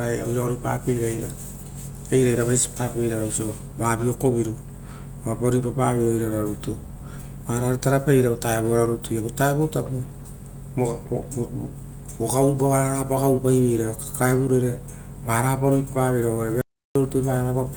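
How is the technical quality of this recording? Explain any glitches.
There's one glitch, an audio dropout to silence near the end of this speech recording. From 16.61 s to 16.95 s, about 340 ms, the sound cuts off and drops to silence, with no room tone underneath, then comes back abruptly. That silent gap means the recorder kept writing silence while the input was missing, most likely from a momentary lost connection or a brief mute, so whatever was said there is simply gone.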